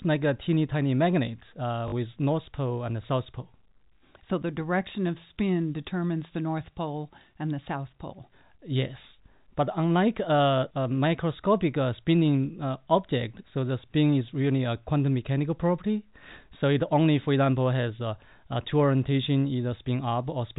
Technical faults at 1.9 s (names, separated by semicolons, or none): packet loss with last packet repeated